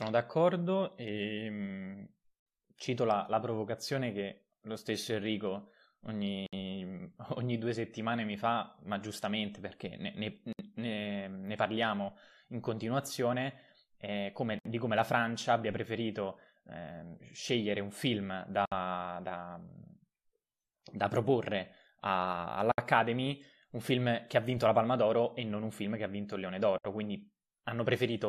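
At 6.46, 10.53, 14.59, 18.65, 22.72 and 26.78 s the speech stops for about 64 ms, a gap at a join of encoded pieces. Each piece was encoded on its own and the pieces were butted together, so encoder start-up silence and end padding remain. The gaps have smeared edges, for example after "ma giustamente perché ne" and before "di come la". Unlike a packet dropout, they recur exactly every 4.0 s, all last the same length, and the speech resumes where it stopped without losing anything.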